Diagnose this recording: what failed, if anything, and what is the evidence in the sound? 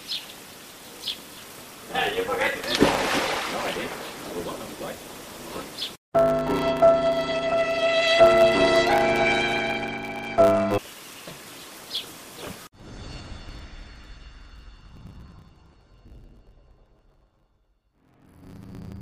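A steady buzz at 100 Hz runs through the whole recording, and the audio plays about 1.16 times too fast while its timbre stays intact. This is a block size mismatch (truncated) at the driver or buffer stage: one stage hands over longer blocks than the next one takes, so the tail of every block is discarded. The regular cuts produce the buzz at the block rate, and the lost material shortens the playback. The sound fits a 512-sample block being written and a shorter one being read.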